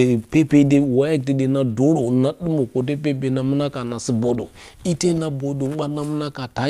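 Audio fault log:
No technical faults can be heard in this speech recording; the signal holds steady and continuous throughout.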